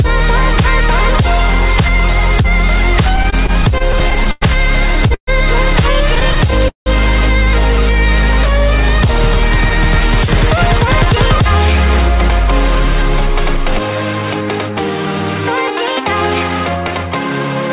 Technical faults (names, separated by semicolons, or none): repeated stalls (stutter); call audio freeze; jitter buffer speed-up